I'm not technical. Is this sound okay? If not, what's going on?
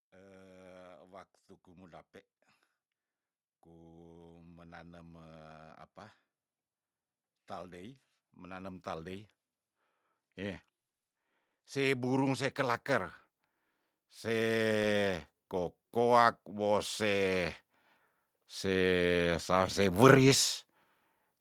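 No, not quite. What you're hearing is automatic gain rising: the volume control decided the voice was too quiet and turned itself up gradually. Both the voice and the background noise swell together over a second or more. It happens four times, from 0.18 to 2.09 s, 4.25 to 5.84 s, 11.73 to 13.16 s, and 13.97 to 17.55 s. That last one is the longest and the biggest lift.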